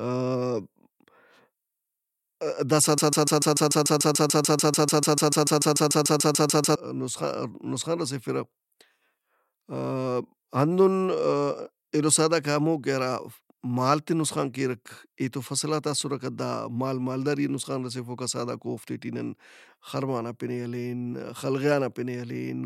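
At 2.98 s the speech locks into a broken-record loop: a 146 ms fragment repeats back to back about 26 times until 6.76 s, a steady stutter. Likely the player or stream stalled and kept resending its last buffer, so nearly 4 s of speech is lost.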